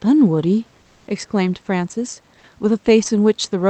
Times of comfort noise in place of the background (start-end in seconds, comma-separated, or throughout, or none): 0.81-1.07